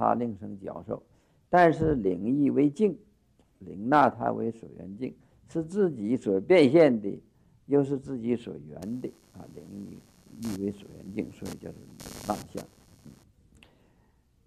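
From 8.82 to 13.24 s, computer activity noise adds a buzzing chirp, around a hundred pulses per second, roughly 25 dB below the sound. Load changes of the processor, graphics card or mouse are disturbing the shared ground.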